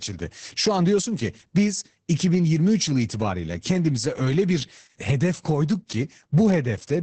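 The speech in this clip has been through Opus voice compression at a very low rate, in the SILK speech coder restricted to wideband. The heaviness of the damage points to a bitrate of roughly 10 kbps. Throughout, nothing survives above about 8.6 kHz, so the speech sounds muffled. The coarsely coded excitation leaves it hoarse and slightly robotic.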